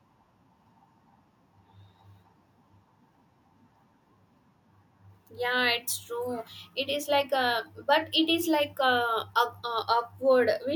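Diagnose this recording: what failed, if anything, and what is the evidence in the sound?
No audible fault.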